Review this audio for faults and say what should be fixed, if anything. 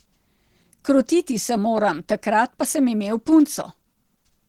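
Opus compression runs throughout the speech, most likely from a low bitrate around 16 kbps in hybrid mode. Voiced sounds turn hoarse, muffled and grainy. A spectrogram shows noise-filled, smeared upper bands where clean harmonics should be. Encode from the original source at a higher Opus bitrate.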